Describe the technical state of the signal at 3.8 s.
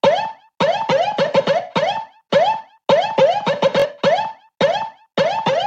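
A Bluetooth stutter runs from 3.80 to 3.86 s: lost packets make the receiver replay its last short slice, a brief buzz, seen as repeated identical waveform cycles.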